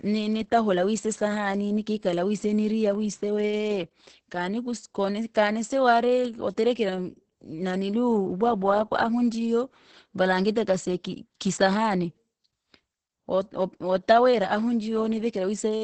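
This is a speech clip with Opus voice compression throughout. Nothing is heard above about 8.7 kHz, close to the 8 kHz limit of Opus wideband. The speech sounds muffled and hoarse, with a slightly robotic edge. That points to the SILK linear-prediction coder running alone at a low bitrate, around 10 kbps. At that rate the excitation is coded coarsely, so the voice comes out hoarse. The damage is heavy.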